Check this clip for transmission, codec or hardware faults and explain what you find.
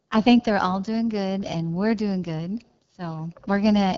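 The clip has one fault, present throughout: the speech has passed through the AMR wideband (HD Voice) codec at a low rate. The encoder models the vocal tract and drives it with a sparse pulse excitation, and the top of the band is synthesised noise rather than coded detail. The plainly audible roughness and rasp point to one of its lowest modes, around 8.85 kbit/s. Voices sound gritty and buzzy, and nothing survives above about 7.5 kHz.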